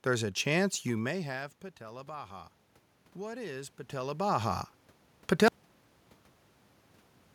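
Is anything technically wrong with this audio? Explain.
Yes, there is one fault. From 0.99 s to 2.6 s, the speech and the room noise behind it swell up together, slowly, by about 4 dB. This is automatic gain rising. Around 1 s the talker moves and the level at the microphone falls by about 18 dB. The gain control reads that drop as too quiet an input and gradually raises its gain. Because it boosts everything it receives, the background rises along with the voice.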